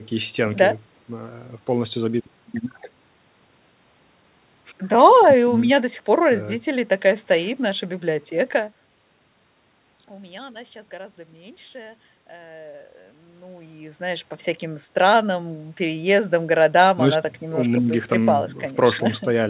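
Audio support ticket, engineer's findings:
Nothing wrong found in this speech clip; the level rides up and down gently at times, and the top end stops around 4 kHz, as expected for a call going through a G.711 A-law path.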